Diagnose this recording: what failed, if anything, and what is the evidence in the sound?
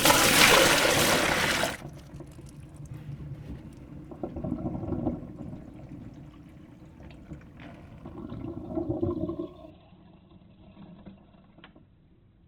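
The network stage failed. From 9.70 s to the end at 12.48 s, the adaptive stream dropped to a lower bitrate after the connection slowed. The change is abrupt and leaves no gap. Above 4.3 kHz there is nothing left, and codec artefacts rise in the remaining sound. That band limit and the artefacts fit a switch from an Opus stream near 64 kbit/s to one near 12 kbit/s, which must discard the treble to fit the smaller budget.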